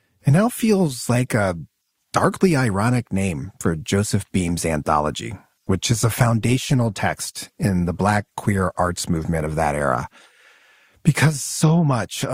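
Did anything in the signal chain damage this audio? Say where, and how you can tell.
Yes: an adaptive stream at a lower bitrate, a network-stage fault. From 5.53 to 9.53 s codec artefacts rise with no gap. A spectrogram shows an abrupt change in quality, consistent with a drop from roughly 64 to 32 kbit/s.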